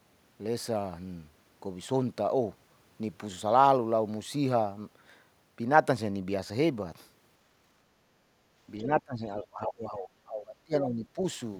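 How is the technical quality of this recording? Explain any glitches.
The recording has two related glitches near the end, both pointing to a speakerphone-style echo problem.

From 8.79 to 9.01 s, the other side's voice is leaking through: a faint second voice, roughly 15 dB below the main speech. It is likely loudspeaker echo that the canceller left in the microphone signal. It is a separate voice, not a reverberant tail of the talker's own sound.

From 8.86 to 11.2 s comes speech suppressed in double talk. The talker's level sinks, by roughly 20 dB at its deepest, for about two seconds in total. The likely cause is the echo canceller turning everything down while both sides spoke. Unlike a network dropout, the talker's level is turned down rather than the audio data being lost.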